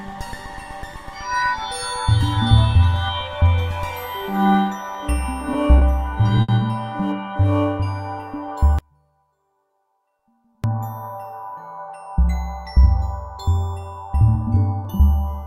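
At 5.78 s and again at 6.41 s the audio briefly hangs in two short stalls from a late packet. The jitter buffer ran dry when a packet failed to arrive on time, so the receiver stretched the last sound, by 30 ms the first time and 70 ms the second, then resumed from exactly where it stopped. Nothing is skipped. The timing slips later each time, and the held sound carries a slight buzz or dip. A genuine loss would cut material out instead.

From 8.79 s to 10.64 s the sound drops out abruptly for about 1.85 s, leaving only a faint residue some 35 dB below the normal level. The likely cause is the wanted signal being lost while the path downstream stayed live, so a faint sound remains in the gap. It is not a pause or a fade, since the cut and the return are both sudden. Unlike the stalls, this is a real loss of material.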